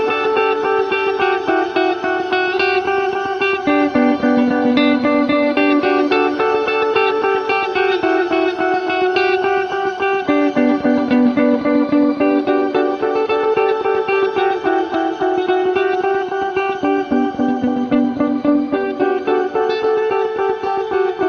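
Nothing in this recording of sounds stood out as a technical fault on listening.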